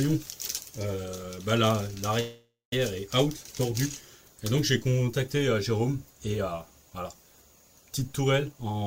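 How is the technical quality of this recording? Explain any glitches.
The recording has two glitches, both from the network path: a pause early on and a rushed stretch at the very end.

Call audio freeze, 2.20 to 2.73 s: the sound stalls and the last fragment is stretched into a fading buzz that drops to about 150 ms of silence before the audio resumes where it left off. This likely comes from packets stalling in transit until the jitter buffer ran dry. The receiver filled about 0.52 s with synthesized sound, so nothing is lost, but everything afterwards is delayed by about 0.52 s.

Jitter buffer speed-up, 8.52 to 8.85 s: the final third of a second plays at about 144% speed with unchanged pitch, so it sounds hurried. The buffer contained more audio than its target, so the receiver cut short pitch-period slices repeatedly to catch up, removing around 150 ms in total.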